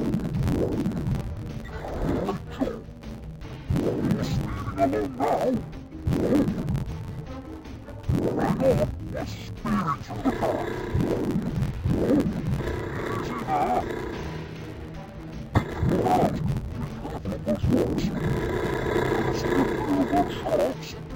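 The audio is affected by interleaved audio read as planar from start to finish. It sounds dull and robotic, with a steady buzz at about 86 Hz and no clear drop in pitch. Each short block of alternating left and right samples is split in two, with the first half taken as left and the second as right. Both halves play at half speed, so the pace holds. The blocks repeat every 11.6 ms, which fits a 512-sample block.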